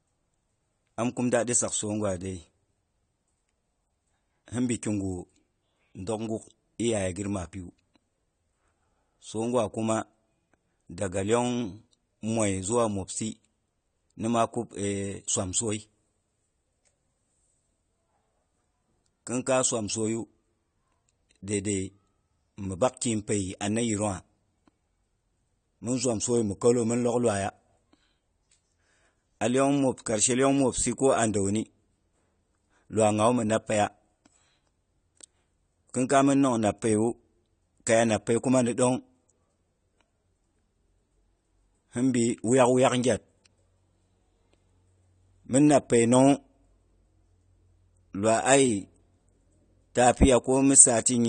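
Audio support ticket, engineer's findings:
Dull, band-limited speech throughout the clip, nothing audible above about 9 kHz. Sibilants fizzy and smeared, sustained vowels warble. Damage plainly audible. Likely AAC compression, AAC-LC at a bitrate that fits roughly 32 kbps: the encoder lowers its cut-off, coarsely quantises each frame's spectral lines, and leaves holes or noise-filled bands that warble frame to frame.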